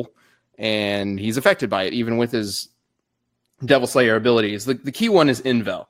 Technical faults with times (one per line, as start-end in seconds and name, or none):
none